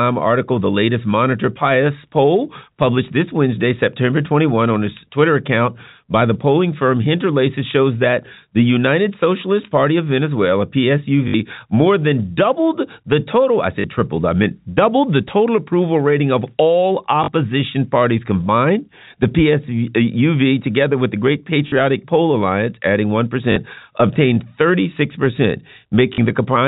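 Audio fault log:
11.28–11.34 s, 13.80–13.84, 17.24–17.28, 21.68–21.72, 23.52–23.56 and 26.14–26.18 s: packet loss with last packet repeated. The receiver lost audio for 60 ms at first, then 40 ms each time, and filled each gap by replaying the last packet. Each repeat buzzes around 50 Hz, which fits 20 ms packets, giving brief robotic stutters.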